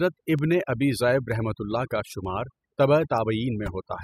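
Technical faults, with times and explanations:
Throughout: overdone noise removal. A noise reduction stage set far too hard removes individual frequency bands whenever they sit near its noise estimate. The hiss floor collapses into near silence dotted with twinkling, chirpy specks, and the quieter parts of the speech are pulled down along with it. It differs from a plain low-pass or band-limited sound because the artefacts flicker and vary with the level, rather than staying fixed.
0.39 to 3.18 s: word clock ticks. Four short, sharp ticks of uneven strength fall at a steady rate of about one per second. They come from a digital link read by a device running on its own clock instead of locking to the sender's. Each time the two clocks slip past each other, a sample is dropped or repeated. The one-second spacing fits a clock mismatch of roughly 20 parts per million. Unlike random clicks or dropouts, these ticks keep a regular rhythm and carry no gap in the sound.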